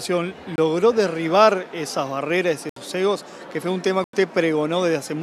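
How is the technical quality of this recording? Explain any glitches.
The recording has three dropouts where the sound stops dead for a moment. Each is a block of digital silence: a run of samples replaced by zeros, likely because the output buffer was not filled in time. The first, at 0.56 to 0.58 s, lasts about 23 ms and fits a 1024-sample buffer. The second runs from 2.69 to 2.76 s, about 70 ms. The third, 4.04 to 4.13 s, lasts about 93 ms and fits four such buffers. The audio cuts to zero and back without a fade. The first is a brief gap. The longer two are short holes.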